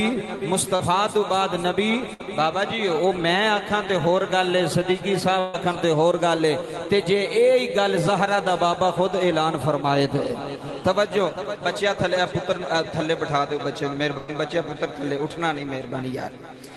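A brief smear of about 40 ms at 0.75 s in this call audio is short concealed packet loss: a few hundredths of a second never arrived, and the receiver extended the preceding sound over the gap. At 2.14, 5.39 and 14.17 s the sound stretches into a held buzz or fading hiss for about 60, 140 and 100 ms, then resumes further on. These are bursts of packet loss, where concealment covered runs of audio that were lost or arrived too late. The top end of the call codec stops near 12 kHz throughout.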